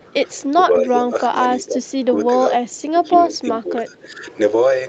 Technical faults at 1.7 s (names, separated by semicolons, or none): speech suppressed in double talk